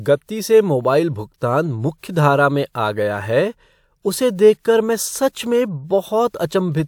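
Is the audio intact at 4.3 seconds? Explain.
Yes, the speech at 4.3 seconds plays through cleanly, with no dropout, click, distortion or other audible fault at that moment.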